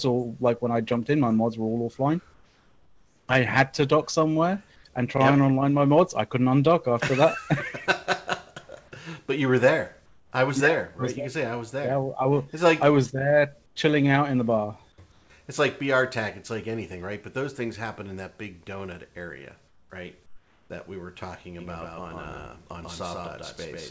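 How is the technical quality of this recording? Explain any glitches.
The recording has two distinct faults, heard over audio that stops at 8 kHz, which fits a wideband call codec such as G.722.

Comfort noise in place of the background appears seven times: 2.34 to 3.28 s, 4.76 to 4.84 s, 10.06 to 10.32 s, 13.66 to 13.76 s, 15.12 to 15.30 s, 19.68 to 19.90 s and 20.26 to 20.70 s. In these gaps the natural background gives way to a flat, featureless hiss, up to about 6 dB quieter, lasting from 80 ms to nearly a second. This likely comes from discontinuous transmission. The sender goes silent during pauses, and the receiver fills them with synthetic noise roughly matched to the background.

A doubled audio track begins abruptly at 21.59 s and runs to the end. A second, full-band copy of the sound trails the original by around 150 ms at roughly equal loudness, producing a dry, stuttering double with no room tail. 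The likely cause is the same signal being mixed in twice, once through a slower path.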